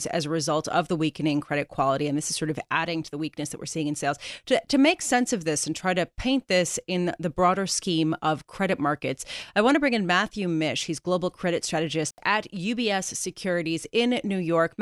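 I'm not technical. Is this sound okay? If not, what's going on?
No, there's an intermittent contact at 12.09 to 12.18 s: a loose cable or plug briefly lets go, so the speech drops out for about 70 ms with a crackle.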